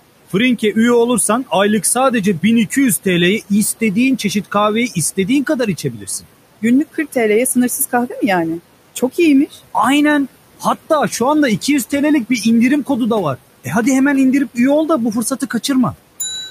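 Noise suppressor artifacts run through the whole clip. Background noise drops by about 17 dB between phrases, then rises under the speech. At 5.77 to 6.25 s, right after "çeşit kahveyi istediğin kadar", and again at 9.5 s, the suppressor mistakes speech for noise. This is speech cut by the noise suppressor. Sounds are pulled down by up to about 12 dB and come out swallowed and faint.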